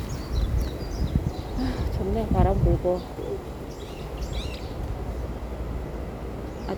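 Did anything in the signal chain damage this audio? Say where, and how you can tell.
No, nothing in the signal chain damaged this audio.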